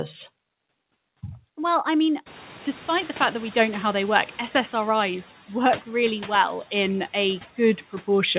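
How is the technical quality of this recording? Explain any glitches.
One glitch is audible in this speech recording, heard through a narrowband call path whose band stops at 4 kHz, which fits G.711 mu-law at 64 kbps.

From 2.26 to 4.39 s, just after "I mean", the noise suppressor is catching up. The room noise jumps by roughly 23 dB, and the suppressor's noise estimate lags, so the noise first comes through with less reduction. Over about 2.1 s it sinks as the estimate adapts. Unlike pumping, it is a single slow settling that does not follow the speech.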